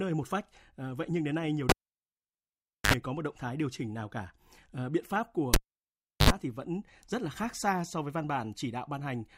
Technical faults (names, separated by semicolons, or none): cable pulled and plugged in